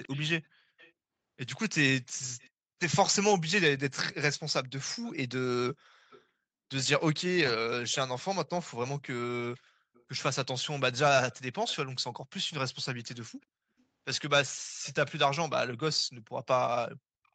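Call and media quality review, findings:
Echo leak, 0.03–2.5 s, 4.33–6.22 s, 7.92 s to end: likely far-end loudspeaker echo canceller leaving residual mic pickup, returned to sender. Faint delayed copy of the speech trailing by 380 ms, about 20 dB down at first, fading to roughly 30 dB down.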